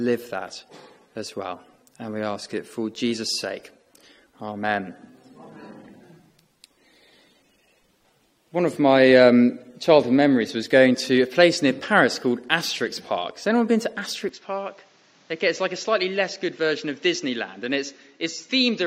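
At 14.29 s the sound turns abruptly duller and noticeably quieter, with nothing above 7.6 kHz and a faint new noise floor, switching without any gap and staying so to the end. The likely cause is the input switched to a poorer device.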